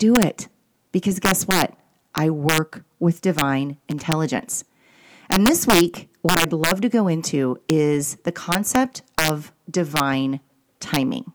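Integer overflow runs through the whole speech clip. The gain pushes the signal about 6 dB past the largest value the integer format can hold. Those peaks are not limited. They wrap around to the opposite sign and jump across the full range. Only a small fraction of samples goes over, well under one percent. So the fault appears only on the loudest moments. Each one is a violent, sharp crack, far harsher than ordinary clipping.

Loose connector crackle breaks in from 3.91 to 4.04 s. A worn or dirty contact is making and breaking rapidly. The signal is chopped on and off many times in that short span. Any DC on the line adds pops at each break. The result is an irregular burst of scratchy crackle. It lasts about 0.13 s and sits on top of the speech.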